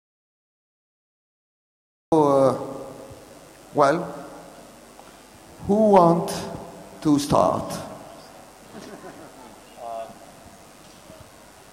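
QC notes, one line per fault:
0.0–2.12 s, audio dropout to silence. The clip opens already in the dropout, and the sound begins abruptly at 2.12 s in mid-flow. Before that the gap is silent, with no room tone or hiss at all. That total emptiness points to the input being lost upstream while the recorder kept writing silent samples, likely through a disconnected device, a failed link or a stray mute. Whatever happened in those first two seconds is gone.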